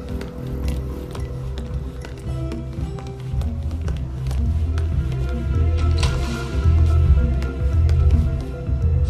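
No technical faults are audible.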